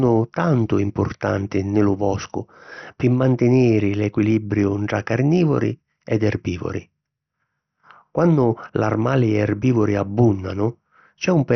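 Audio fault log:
Throughout, MP2 compression: the speech sounds dull, with nothing above about 6.2 kHz, and carries a gurgling, granular roughness. Upper sub-bands drop out and flicker. The rest are coarsely quantised. This heavy damage likely comes from MPEG Layer II at a low rate, around 48 kbps.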